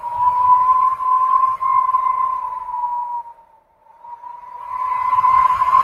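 A noise suppressor applied to music or sounds is active across the whole clip. Processing built for speech is treating steady tones, ambience and decay as noise and pulling them down, so attacks pass while sustained material and tails sink. The gain it applies swings by roughly 15 dB, which makes the level pump and flutter rather than sit steady, and leaves held passages sounding thinned and hollow between transients.

Two stretches show sound cut by the noise suppressor. From 2.35 to 2.76 s the suppressor clamps down on the sound, dropping it by about 9 dB for roughly 0.4 s, so what should sustain or ring out falls away early. From 3.23 to 4.78 s a longer cut of about 1.5 s goes deeper, about 12 dB at its lowest, and the sound there sinks noticeably below its surroundings before recovering.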